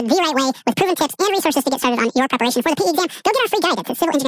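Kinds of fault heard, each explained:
Wrong sample rate: speech sounds squeaky and rushed, twice normal speed and an octave high, because audio recorded at 16 kHz plays at 32 kHz.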